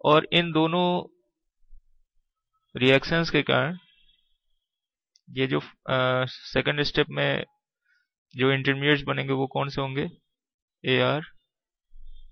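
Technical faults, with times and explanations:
Nothing stood out on listening to the recording.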